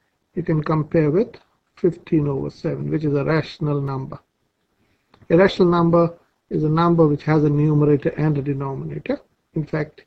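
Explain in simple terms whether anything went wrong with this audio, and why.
Between 3.36 and 4.13 s there are four tiny, evenly spaced ticks, each only a few milliseconds long. These are CD scratch ticks: a scratch ruins the same spot once per disc turn. Unlike random vinyl crackle, they repeat steadily, about five per second.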